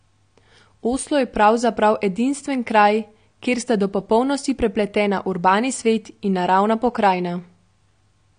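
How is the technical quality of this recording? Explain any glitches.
The quality is limited by plainly audible lossy compression that runs through the whole recording, most likely AAC compression. The speech sounds dull and smeared, with a watery, warbling fizz on sibilants and held vowels. Nothing reaches above 9.6 kHz, which fits a low bitrate of around 32 kbps. The encoder quantises each frame's spectrum coarsely, dropping the top band and thinning detail below it. On a spectrogram this shows as a hard ceiling at 9.6 kHz with patchy, speckled holes beneath it.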